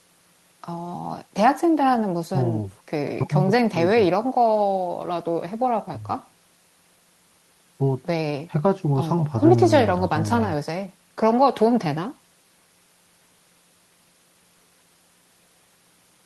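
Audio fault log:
No faults are heard in this speech recording. It has come through a WebRTC call path, and the high frequencies stop at around 12 kHz, which points to an Opus codec running at that bandwidth.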